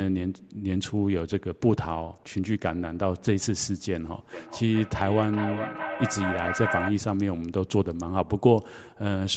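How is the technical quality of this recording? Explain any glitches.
The recording has one clear fault, an echo loop in the middle of the clip. Throughout, nothing reaches above about 8 kHz, which points to a call codec such as Opus running at a modest bitrate.

Feedback echo between two devices, from 4.33 to 7.0 s: a second device in the same room plays the call audio aloud, and this microphone picks it up again. Its echo canceller only removes what its own speaker plays, so the sound comes round again roughly every 0.4 s. Each repeat is thinner and more ringing than the last, and the loudest sits about 6 dB below the speech.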